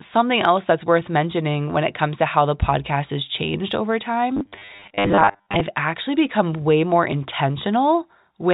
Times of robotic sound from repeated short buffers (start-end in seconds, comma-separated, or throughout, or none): 4.37-5.61